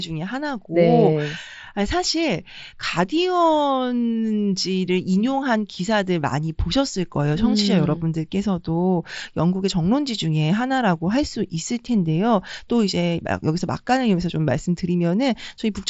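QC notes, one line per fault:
No faults are present in this speech; the signal carries the character of a wideband Bluetooth headset link using the mSBC codec, with nothing above about 7.7 kHz and only a light grain from the codec on louder passages.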